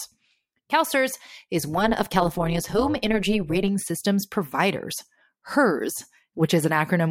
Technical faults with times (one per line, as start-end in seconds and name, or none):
1.77-3.68 overlap-add ripple